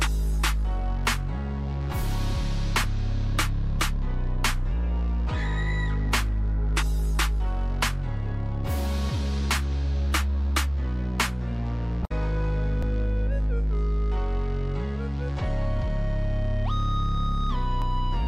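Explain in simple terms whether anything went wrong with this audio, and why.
The sound skips for an instant at 2.84, 12.83 and 17.82 seconds. This is audio missing between chunks, likely lost while switching between 5-second recording pieces.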